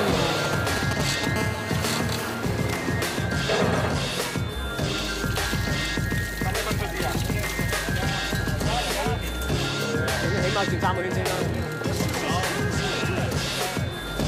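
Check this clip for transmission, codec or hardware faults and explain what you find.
Two bursts of GSM interference from a nearby 2G phone are present, one right after the other.

From 0.45 to 1.25 s come GSM signalling bursts: the phone sends short groups of radio pulses, and the audio circuitry rectifies them into a galloping dit-dit-dit of brief 217 Hz buzzes, roughly as loud as the signal. A spectrogram shows clustered vertical stripes; the waveform shows spiky packets.

From 1.36 to 2.35 s a steady GSM phone buzz follows, as the phone's in-call transmission pulses at 217 Hz and is rectified into a hard, raspy buzz about 9 dB below the signal. On a spectrogram it forms evenly spaced horizontal harmonic lines; the waveform carries a regular 4.6 ms pulse train.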